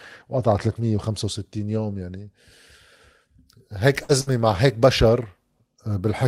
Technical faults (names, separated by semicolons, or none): burst of packet loss